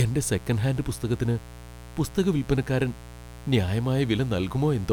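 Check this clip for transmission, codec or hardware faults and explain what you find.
There is one hardware fault. Mains buzz runs through the whole clip. Switching spikes from 60 Hz mains leak in, producing a steady, raspy buzz roughly 20 dB below the speech.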